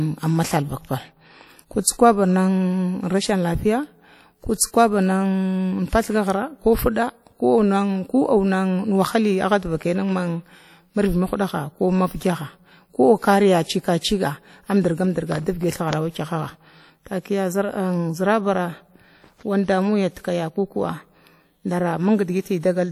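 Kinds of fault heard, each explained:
WMA compression: The speech was most likely squeezed through a Windows Media Audio encoder at a low rate, with damage consistent with roughly 48 kbps. The transform smears quantisation noise across long blocks and drops weaker spectral detail, so throughout the clip the voice sounds washy and ringing, with a hiss that swells and recedes along with the speech. The smearing and thinned detail are plainly audible, not subtle.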